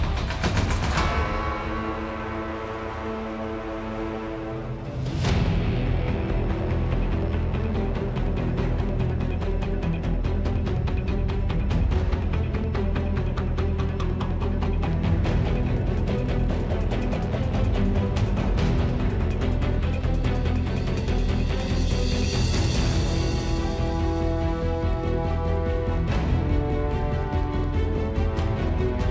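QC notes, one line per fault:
No fault to note.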